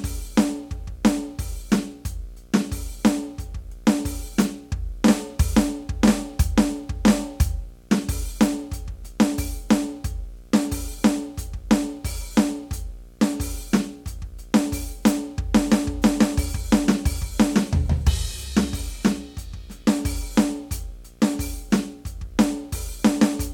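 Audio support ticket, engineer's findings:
Steady buzz under the music, clip start to end, with hiss-like hash above it. Level around 30 dB below programme. Fundamental 60 Hz, matching a 60 Hz video field rate. Video or display buzz: screen or video cable coupling into the audio path. Check display proximity, shared grounds, and cable routing near video leads.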